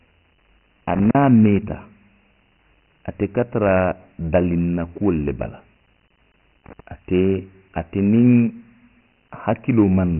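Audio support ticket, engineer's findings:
Dialogic VOX ADPCM throughout: heavy gritty hiss riding the speech, nothing above 2.9 kHz. Consistent with 4-bit OKI ADPCM at 6,000 samples a second, about 24 kbps. Coarse quantisation steps cause the grit.

Loose connector crackle at 0.94–1.15 s and 6.66–6.80 s: irregular scratchy bursts. Worn or dirty contact making and breaking, chopping the signal. Check cable and jack.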